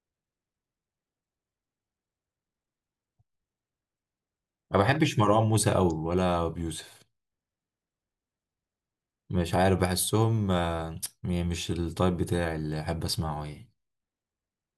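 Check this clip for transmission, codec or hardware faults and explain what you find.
Nothing in this speech recording points to a fault anywhere in the chain. A full listen turns up no events worth flagging.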